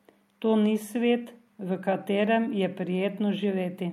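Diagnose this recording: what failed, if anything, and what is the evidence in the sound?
No audible fault detected.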